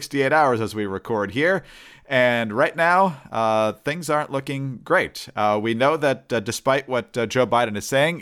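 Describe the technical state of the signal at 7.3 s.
At 7.3 s the speech signal is intact, with no audible technical fault at that moment.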